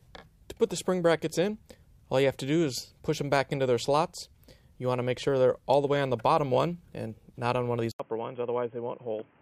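At 7.92 s, an 80 ms waveform gap, then dull, quieter, noisier sound to the end; the spectrogram goes blank above 3.3 kHz, likely input switched to a poorer device.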